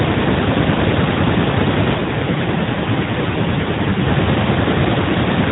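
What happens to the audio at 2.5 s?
At 2.5 s the speech is inside an AMR rate drop that runs from 1.98 s to 4.09 s. The network has pushed the mobile codec to a lower mode, so fewer bits describe each frame. The sound fits a step down from 12.2 kbps to 5.9 kbps. The bandwidth stays narrowband and nothing cuts out. The voice turns rougher, buzzier and more synthetic, then clears when the rate climbs back.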